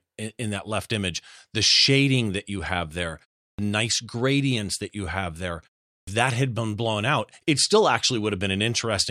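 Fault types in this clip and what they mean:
Clipped start after a pause: speech resumes abruptly out of silence with its opening sounds missing, once at 3.5 s, where "nice gradients that you" begins cut short after "that you have there", and again at 5.99 s before "that had been blown". About 84 to 86 ms is lost each time. After gaps of roughly a third of a second, the output path goes idle and needs that long to wake or relock, swallowing the onset.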